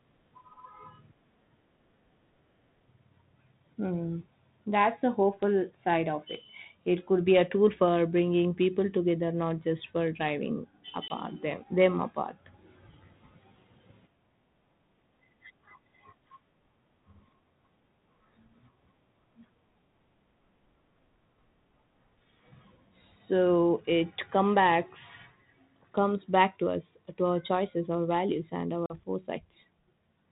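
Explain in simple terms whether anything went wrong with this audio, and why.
Packet loss on an ADPCM call shows up at 11.08 s, right after "not just for driving", and at 28.86 s, after "choices our values and". A short stretch of this speech vanished into silence, about 20 ms the first time (roughly one packet's worth) and 40 ms the second (about two). The phone's decoder guesses each new sound from the last, so after the gap its guesses are off, and the speech comes back briefly rough before settling.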